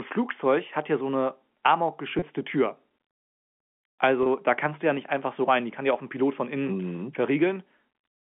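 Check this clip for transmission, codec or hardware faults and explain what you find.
Two brief transmission faults, both packet loss with pitch repetition. At 2.19–2.22 s and 4.23–4.26 s, just before "da kannst du ja", about 30 ms is missing each time, which fits a single lost packet. The receiver repeats the last pitch period across the gap, so the sound briefly holds with a slight buzz instead of dropping to silence or clicking. The telephone band of G.711 coding, limited to about 200 Hz–3.4 kHz, is audible throughout as the normal line sound.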